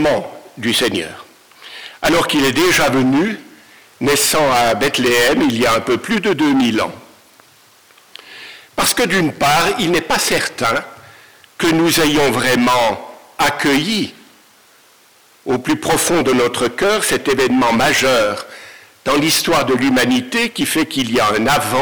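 Hard clipping runs through the whole clip: the signal arrives at some stage about 30 dB hotter than that stage can pass, so every peak is sliced flat at the ceiling, and roughly a fifth of all samples sit pinned there. Those squared-off tops generate a dense spray of high harmonics, so rather than occasional crackle on peaks, every loud moment of the audio turns into a harsh, buzzing fuzz from start to finish.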